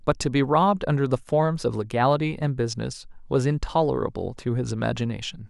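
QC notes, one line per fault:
No technical faults can be heard anywhere in the speech signal.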